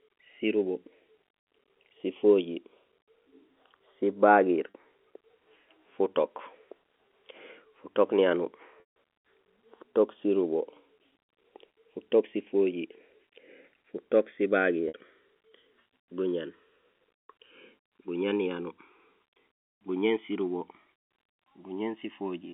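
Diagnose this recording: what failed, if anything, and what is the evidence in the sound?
Channels drifting apart, at the converter clocks: two devices differing by tens of ppm let the inter-channel delay creep to roughly a millisecond, drawing slowly sweeping comb notches on a spectrogram.

Packet loss with pitch repetition, on the network: gaps at 4.7, 7.08, 8.8, 14.88 and 19.54 s (40, 20, 160, 60, 200 ms) show repeated pitch cycles fading out.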